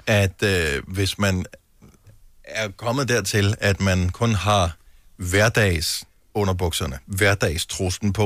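Nothing goes wrong anywhere in this speech recording, so there's no technical fault to point out at any moment along the way.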